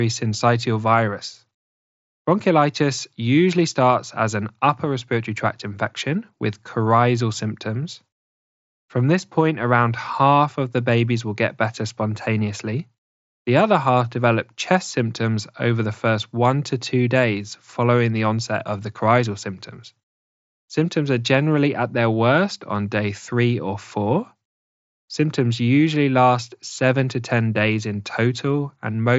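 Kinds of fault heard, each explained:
No faults are heard in this speech recording.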